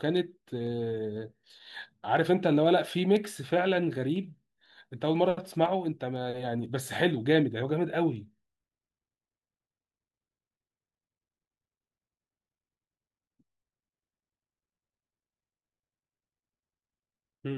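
Speech with periodic USB or driver dropouts from 0.17 to 17.16 s: every 0.5 s a tiny slice, a fraction of a millisecond, is skipped, producing regular ticks while sound plays.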